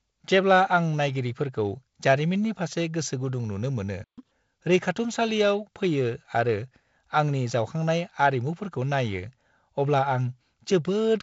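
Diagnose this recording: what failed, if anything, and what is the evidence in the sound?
At the playback stage, a playback stall cuts the speech off just after "फारसे गोसोगुदुं नुनो मोनो". The output goes silent from 4.04 s to 4.18 s, a gap of about 135 ms. The likely cause is a player buffer that ran dry or a blocked audio thread. No samples reached the output until it recovered.

A catch-up at higher speed follows immediately, from 4.18 s to 4.31 s. For this short stretch the audio plays at twice normal speed. The pitch jumps by roughly ten semitones, giving a brief chipmunk quality. Then both drop back to normal. The player is resampling its backlog to win back the time lost in the stall. The raised pitch is heard through the G.722 wideband coding with its 7.7 kHz ceiling.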